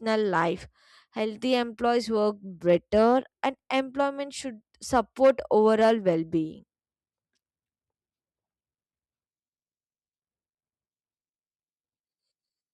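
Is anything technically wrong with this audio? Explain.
No, the speech signal shows no technical faults.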